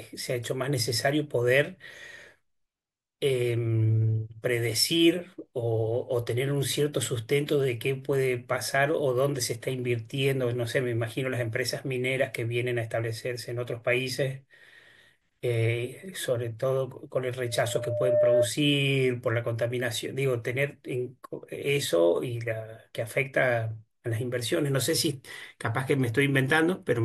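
A speech recording with loudspeaker feedback squeal from 17.44 to 18.50 s. A pure tone near 603 Hz swells over roughly three quarters of a second until it sits about 5 dB above the speech. The microphone is picking up its own loudspeaker, and the loop gain exceeds unity at that frequency.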